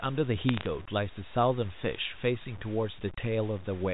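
Throughout the speech a grainy, signal-following distortion is heard, most likely low bit depth without dither, about 6 bits truncated, with noise roughly 20 dB down; the waveform shows coarse stair-steps. From 0.38 to 0.66 s, bit errors on a digital phone line scatter sharp ticks of crackle, seen as isolated vertical spikes on the waveform and thin full-height lines on the spectrogram.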